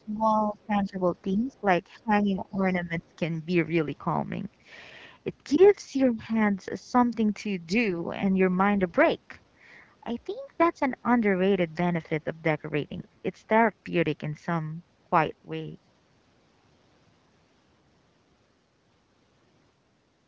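From 0.0 to 0.99 s, 1.33 to 1.63 s and 1.98 to 3.13 s, the speech dips by about 10 to 20 dB, likely speech suppressed in double talk. The waveform envelope sags and the spectrogram's upper bands fade. Between 1.52 and 1.6 s, a faint second voice, about 40 dB below the speech, is likely the other side's voice leaking through. It shows as a weak trace on the spectrogram.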